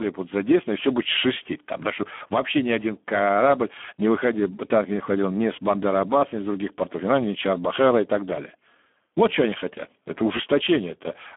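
From start to finish the speech carries Speex codec damage, and it is heavy. The sound is squeezed into a telephone band of roughly 200 Hz to 3.4 kHz, with nothing above 3.8 kHz. The low, thin coding fits a setting near 8 kbps. At that rate the CELP coder has too few bits to model the excitation. Voices turn hoarse and grainy.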